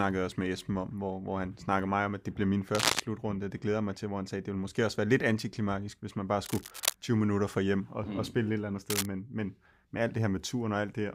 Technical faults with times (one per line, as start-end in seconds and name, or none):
2.75-3.00 cable scratch noise
6.45-6.95 cable scratch noise
8.90-9.06 cable scratch noise